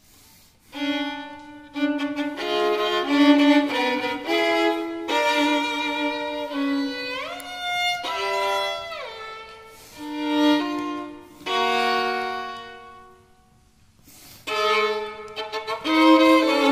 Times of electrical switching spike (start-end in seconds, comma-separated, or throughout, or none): 7.40